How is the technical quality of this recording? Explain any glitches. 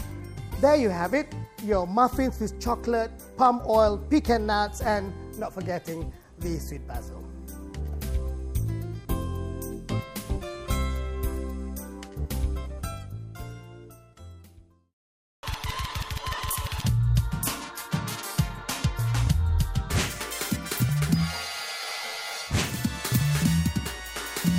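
A wrong sample rate fault occurs from 19.90 s to the end of the clip at 24.58 s. The samples are played back faster than the rate they were captured at, with no conversion. Speed and pitch therefore rise together by the same factor of 1.5, which fits 32 kHz material being played at 48 kHz. The sound runs half again as fast and sits about 7 semitones higher, so this last stretch comes across as sharp, hurried and squeezed.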